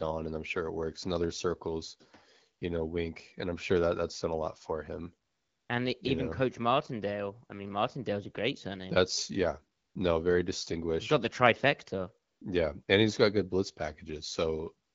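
AMR comfort noise appears six times in this speech: at 2.59 s, 5.27 to 5.69 s after "a lot for him", 9.77 to 9.95 s before "no very distinguished", 12.27 to 12.41 s, 12.83 to 12.87 s before "and he's got good", and 14.87 s to the end. The phone stopped sending speech frames. The receiver filled each gap with steady, smooth synthetic noise, so the real background briefly switches out.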